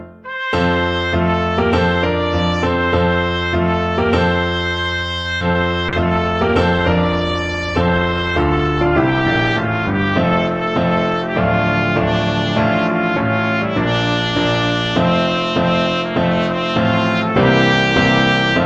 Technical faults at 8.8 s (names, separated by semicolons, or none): call bitrate drop